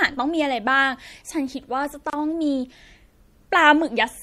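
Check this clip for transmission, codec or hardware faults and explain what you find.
Two faults are audible: codec damage across the whole clip and one short dropout partway through.

Throughout the speech there is a watery, swirly quality, with s sounds turning metallic and chirpy and consonant onsets smeared. The likely cause is MP3 compression at a low bitrate, consistent with about 64 kbps. Short of bits, the encoder removes the treble above a fixed frequency and discards weak spectral components, which flicker in and out from frame to frame. On a spectrogram this appears as a hard horizontal ceiling on the high frequencies, with scattered, blotchy patches switching on and off below it.

At 2.1 s the sound stops dead for about 29 ms and resumes at 2.13 s exactly where it left off. This is a gap at a join of encoded pieces. The audio was encoded in separate sections and spliced without trimming, so the start-up delay of one encoder run and the padded final frame of the previous one both remain as silence. 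The waveform shows a flat gap with edges softened by codec smearing. On a spectrogram it appears as a narrow blank vertical stripe through every frequency.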